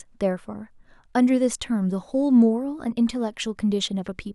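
No technical faults are audible anywhere in this speech recording.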